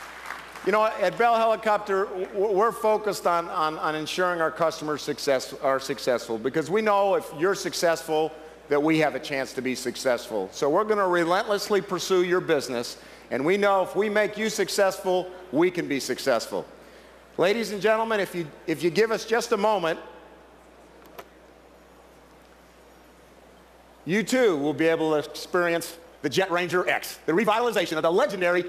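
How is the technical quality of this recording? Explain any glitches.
There's one glitch, right at the tail. From about 25.63 s to the end at 28.68 s you get a time-stretched section: the pace jumps to roughly 1.69 times normal speed while the pitch doesn't budge. That's likely software squeezing the audio to fit a target length, holding pitch by dropping short slices and butting the rest together. You can hear it as a rushed quality.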